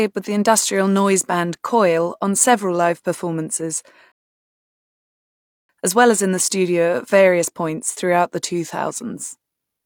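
At 4.12 s, right after "on several live performances", the speech drops into a rebuffering stall that lasts until 5.69 s. The player exhausted its downloaded audio and paused until more data arrived, adding about 1.6 s of dead air. Playback then picks up exactly where it stopped with "as well as in", with nothing skipped. On a waveform this is a flat, empty gap. A spectrogram shows a clean vertical band of silence with matching content on either side.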